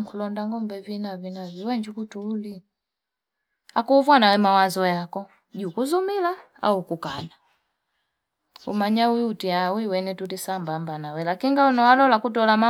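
At 5.88 s a single sharp click marks dropped samples: likely a couple of samples went missing, so the waveform jumps, but unlike a dropout, no audible gap follows.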